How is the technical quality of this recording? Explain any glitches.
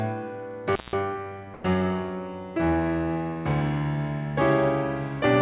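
The music has two audible glitches, and it comes through a call-style path with nothing above 4 kHz, which fits G.711 mu-law.

Intermittent contact, 0.73 to 0.94 s: a loose connection opens for about 176 ms, so the music drops out behind crackle at both edges, leaving faint hiss.

Comfort noise in place of the background, 1.54 to 1.64 s: for 100 ms the real background becomes a steady, featureless noise about 2 dB quieter, likely from discontinuous transmission filling the gap with synthetic noise.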